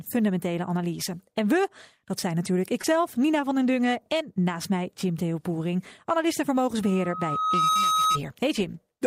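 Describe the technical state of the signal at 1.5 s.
At 1.5 s the speech signal is intact, with no dropout, clipping, distortion or other fault audible at that moment.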